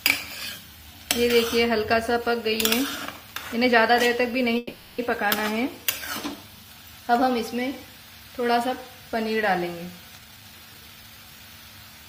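A call audio freeze at 4.57 to 5.00 s holds the last sound as a fading buzz for about 410 ms, then resumes where it stopped, losing nothing, unlike a dropout; this is likely from delayed packets draining the jitter buffer. A jitter buffer speed-up from 10.18 to 11.40 s plays the audio at 134% speed with unchanged pitch, trimming about 0.4 s, which sets it apart from a pitch-raising resample.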